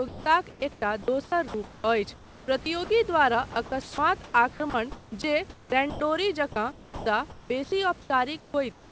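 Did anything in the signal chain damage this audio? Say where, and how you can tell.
Yes. The call-processing stage chopped the speech from 0.08 to 2.90 s, 3.52 to 6.00 s and 6.72 to 8.92 s. Quiet stretches totalling 1.24 s, 0.96 s and 1.04 s turn into synthetic comfort noise. This is likely sound chopped by the voice detector, gating speech into comfort noise.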